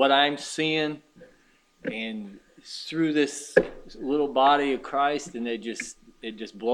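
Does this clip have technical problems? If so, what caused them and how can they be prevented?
No, nothing in the clip stood out as a technical problem on listening.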